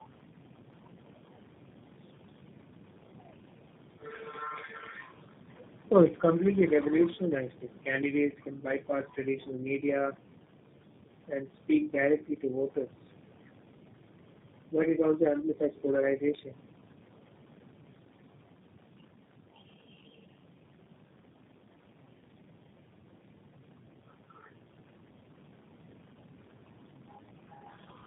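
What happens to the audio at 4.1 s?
Tandem speech coding affects 4.1 s and the whole clip: three speech coders in a row, likely G.729A, GSM full rate and G.729A again, each re-encode the previous one's degraded output. Unlike a single low-rate codec, the roughness and warble compound, with nothing above 3.7 kHz.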